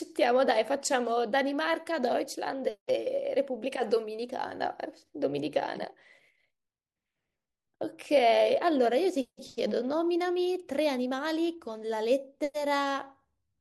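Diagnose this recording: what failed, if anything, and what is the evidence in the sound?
Nothing failed: no stage from capture to playback leaves an audible fault anywhere in the speech.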